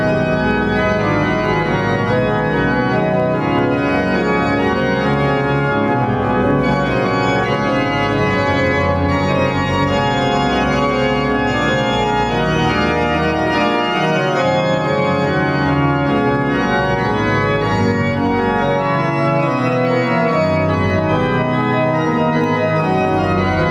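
Gain pumping runs through the whole audio: input gain was likely set far too high, so a fast limiter keeps clamping down, swinging the gain by about 5 dB. Clock slip clicks run from 0.14 s to 23.68 s: two unsynchronised clocks, likely drifting a few hundred ppm apart, drop or repeat single samples roughly every twentieth of a second, giving a soft, steady rattle.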